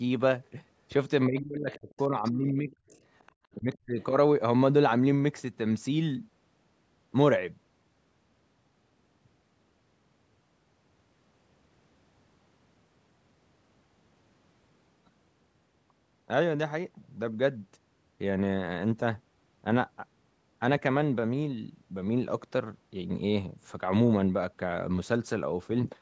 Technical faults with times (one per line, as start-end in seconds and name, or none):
1.27-2.95 speech suppressed in double talk
1.72-2.31 other side's voice leaking through
2.70-3.32 other side's voice leaking through
3.60-4.00 speech suppressed in double talk